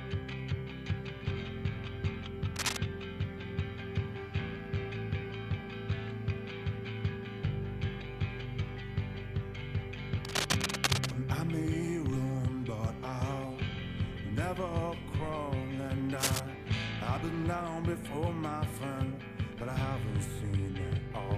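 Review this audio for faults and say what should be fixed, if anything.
Three bursts of cable scratch noise sit right on top of the sound, at 2.56 to 2.78 s, 10.25 to 11.11 s (the longest, nearly a second), and 16.17 to 16.40 s. Each is a dense, ragged scratching roughly as loud as the material itself. That's likely a worn cable or connector being moved, its contact resistance jumping around and injecting noise. Swap or reseat the suspect lead and tape it down so nothing shifts during the take.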